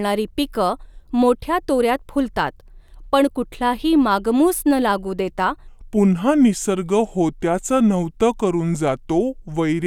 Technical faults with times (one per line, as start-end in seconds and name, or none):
5.67-9.86 section at the wrong speed